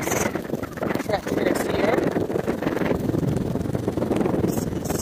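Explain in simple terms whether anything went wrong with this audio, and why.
The audio was chopped into overlapping slices and stitched back together, but the slices were blended so that they didn't add up to a steady volume. This is called overlap-add ripple. Because every joint between slices comes out louder or quieter than it should, the level pulses up and down about twenty times a second for the whole clip. The dips are deep, so it sounds like a fast, rough flutter, a rough tremolo over everything.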